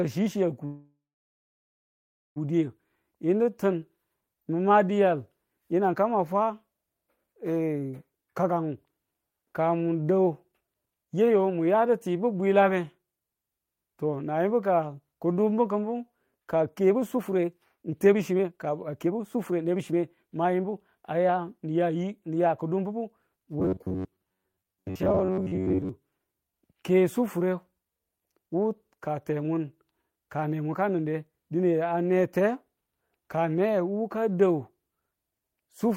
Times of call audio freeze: 0.65-2.38

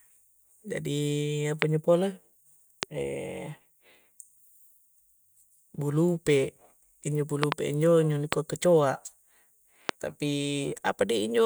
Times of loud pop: 1.62-1.64, 2.83-2.85, 7.43-7.54, 8.33-8.35, 9.89-9.91

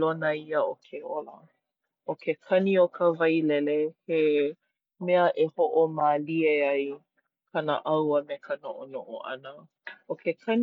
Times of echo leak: none

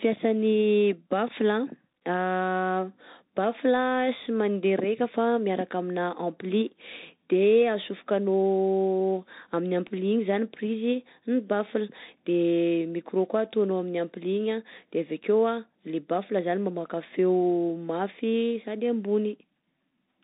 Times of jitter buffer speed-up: none

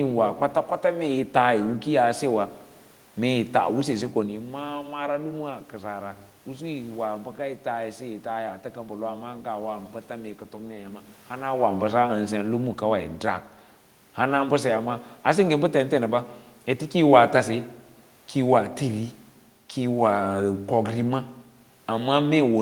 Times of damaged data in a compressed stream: none

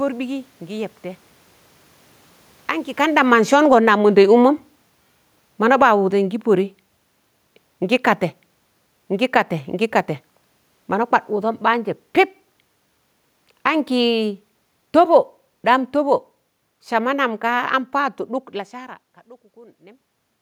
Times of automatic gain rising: 3.84-4.44

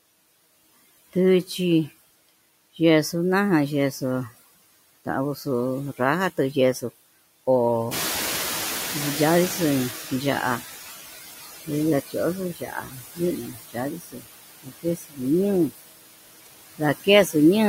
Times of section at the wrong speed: none

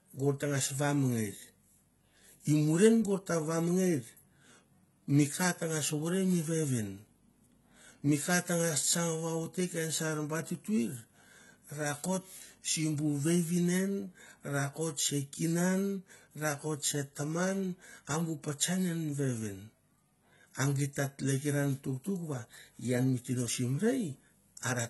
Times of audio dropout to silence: none

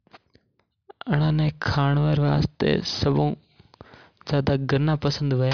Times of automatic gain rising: none

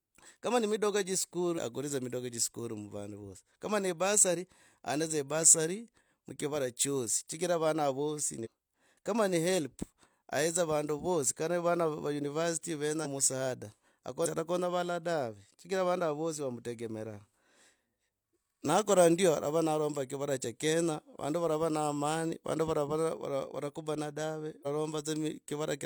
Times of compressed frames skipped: 1.54-1.60, 8.41-8.47, 13.01-13.07, 14.21-14.26, 24.62-24.67

